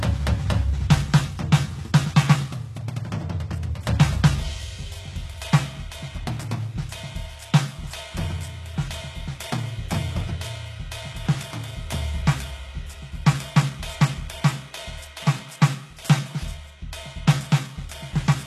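Throughout the music, likely HE-AAC compression: treble above the crossover is rebuilt from copied lower bands, so cymbals sound metallic and grainy rather than dull, nothing reaching past 12.3 kHz.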